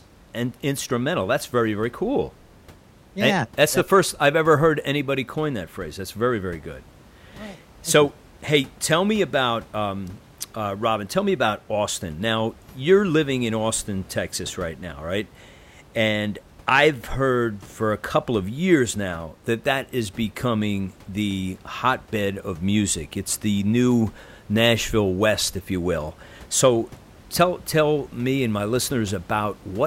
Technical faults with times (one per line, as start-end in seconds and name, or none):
none